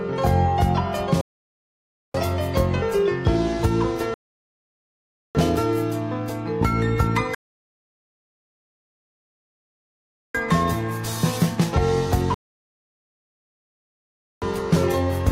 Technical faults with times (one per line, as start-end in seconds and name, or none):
1.21-2.14 rebuffering stall
4.14-5.35 rebuffering stall
7.35-10.35 rebuffering stall
12.34-14.42 rebuffering stall